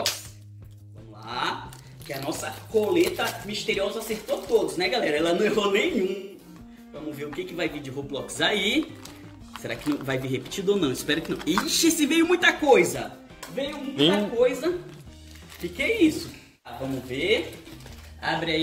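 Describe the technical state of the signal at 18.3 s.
At 18.3 s the signal is intact, with no technical fault present at that moment.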